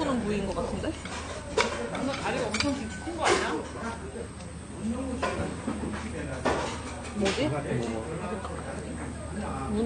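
From start to finish the sound carries a muddle of two different kinds of compression damage, the signature of transcoding between lossy codecs. Nothing comes through above 9.8 kHz, so the top end sounds dull and closed-in. On top of that, the artefacts of both codecs are heard together. The mix likely comes from a modest-rate MP3 pass re-encoded to low-bitrate AAC-LC, with the second encoder wasting bits on the first one's artefacts while adding its own.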